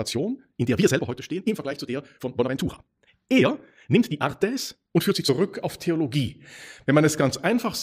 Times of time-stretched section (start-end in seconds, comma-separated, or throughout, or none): 0.00-5.30